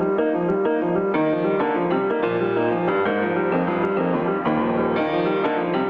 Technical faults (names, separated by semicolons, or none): gain pumping